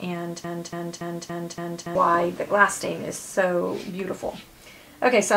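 From 0.44 to 1.95 s, a 284 ms fragment repeats five times back to back: a broken-record loop, likely a stalled player resending its last buffer.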